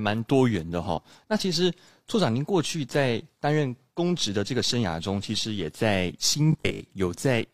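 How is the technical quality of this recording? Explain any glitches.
Two glitches stand out in this speech recording. From 0.93 to 0.99 s a brief glitch marks damaged data in a compressed stream, where the decoder lost sync and jumped to the next readable frame. From 6.53 to 6.83 s the speech turns into a rigid, metallic 50 Hz buzz. This is likely robotic sound from repeated short buffers, with about half the audio replaced by 20 ms repeats.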